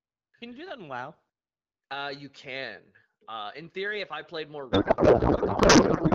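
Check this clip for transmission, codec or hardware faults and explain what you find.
One transmission fault is present, a codec payload misread near the end of the speech. Before it, the wideband speech carries only light coding damage, consistent with AMR-WB at 12.65 kbit/s.

From 4.71 s, right after "if I played more", to the end at 6.15 s, the speech turns into garbled, warbling noise that barely tracks it. The decoder is unpacking frames with the bit fields shifted, which fits octet-aligned AMR payloads being read as bandwidth-efficient.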